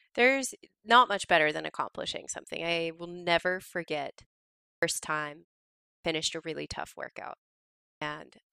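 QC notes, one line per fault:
4.66–4.83 s, 5.90–6.05 s and 7.87–8.02 s, clipped start after a pause: after gaps of 0.44 s, 0.53 s and 0.53 s (the first following "i will never forget", the second just before "a really tough workout", the third just after it), the output device needs time to wake from idle. About 165 ms, 145 ms and 145 ms of onset are lost, so speech resumes abruptly. Unlike a dropout, the missing audio falls only at restarts after silence, never mid-phrase.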